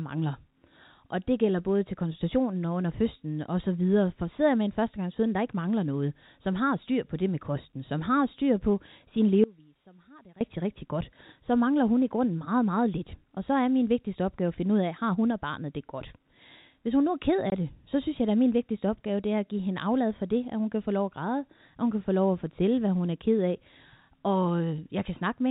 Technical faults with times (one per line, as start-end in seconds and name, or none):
9.44-10.41 audio dropout to a faint residue
17.50 packet loss filled with silence